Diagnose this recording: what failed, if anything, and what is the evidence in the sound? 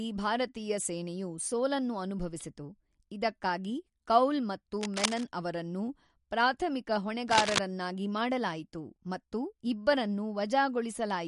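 At the codec stage, the speech has likely passed through MP3 compression at a low bitrate, which fits something near 48 kbps. Short of bits, the encoder has cut the treble at a fixed point, so nothing is heard above 11.2 kHz for the whole clip. It has also dropped quiet frequency lines that flicker in and out between frames. The damage is plainly audible as a watery, swirling texture, with smeared consonant onsets and a dull top end.

In the analogue wiring, a worn cable, connector or control was likely disturbed twice, its contact resistance jumping about and injecting ragged bursts of noise. The first burst of cable scratch noise runs from 4.81 to 5.24 s, just after "ಅನುಭವಿಸಿತು ಇದಕ್ಕಾಗಿ ಕೌಲ್ ಮತ್ತು", sitting a little below the speech. The second runs from 7.28 to 7.60 s, just after "ಅವರನ್ನು ಪ್ರಾಥಮಿಕ", roughly as loud as the speech itself. Each is heard as a brief scratching rustle over the speech.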